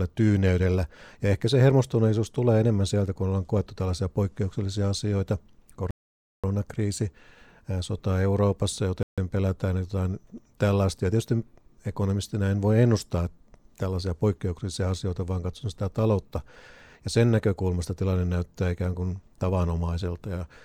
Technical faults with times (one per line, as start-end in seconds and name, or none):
5.91-6.44 Bluetooth stall
9.03-9.18 Bluetooth stall